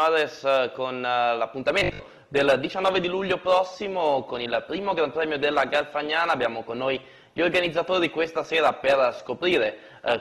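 At 1.58 s the audio drops abruptly, without a gap, to an adaptive stream at a lower bitrate, and it stays there to the end. Codec artefacts grow. The drop sounds like a move from roughly 64 to 16 kbit/s Opus after the connection slowed. From 1.80 to 2.10 s the sound becomes a rigid metallic buzz at 50 Hz. Roughly half of that stretch is repeated material. This is likely robotic sound from repeated short buffers, with late audio replaced by loops that fit a 20 ms buffer.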